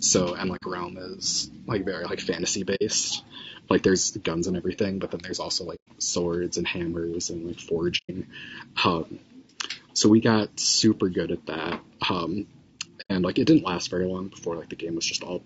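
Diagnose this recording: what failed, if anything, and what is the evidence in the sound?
Codec stage: the speech is rough and grainy throughout, likely from low-delay AAC compression, which fits a bitrate near 32 kbps. A spectrogram shows noise smeared between the harmonics.

Transmission stage: AAC frame loss with muting leaves soft-edged gaps of 60 to 120 ms at 0.56, 2.75, 5.75, 7.97 and 13.01 s. The waveform shows tapered silent holes.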